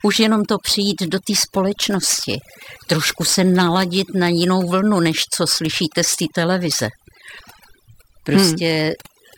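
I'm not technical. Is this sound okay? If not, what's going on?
No. The whole recording has overdone noise removal: the background drops and breaks up into twinkling, warbling specks rather than steady hiss.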